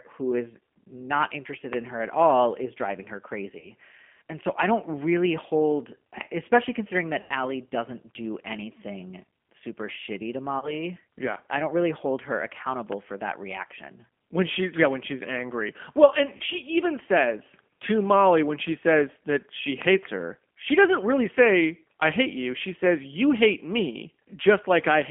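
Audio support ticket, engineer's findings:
G.729 codec, throughout. Speech band-limited to roughly 200 Hz–3.4 kHz, nothing above. Clearly audible roughness and a synthetic edge on all speech, consistent with a CELP vocoder at about 8 kbit/s. Mechanism: each 10 ms frame is rebuilt from a vocal-tract filter, pitch predictor and a few pulses, so fine waveform detail is lost. Component: far-end or gateway encoder.

VoIP packet loss concealed by the speech codec, 3.59–3.70 s after "all is driving her", 7.21–7.33 s between "really hold especially considering" and "doesn't do anything super", 10.59–10.79 s after "anything super shitty to", and 16.37–16.43 s. Symptom: speech smeared into a fading buzzy tone or coloured noise, then weak or rough recovery. Mechanism: decoder extrapolates the last pitch and filter at falling gain. Gaps are 30 ms, fitting one packet, except 90 ms at 7.21 s, which fits three consecutive packets. 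Component: network path or jitter buffer.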